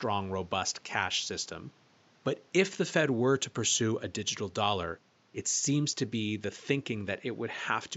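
No technical faults are present in the speech, and the room's own background noise sits about 34 dB below the voice.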